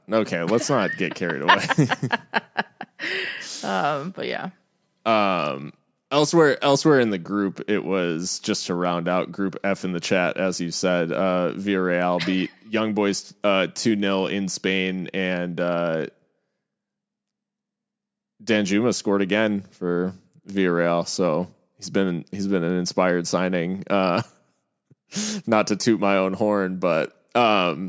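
No technical faults can be heard anywhere in the speech. There is nothing in the audio that needs a timestamp or an explanation.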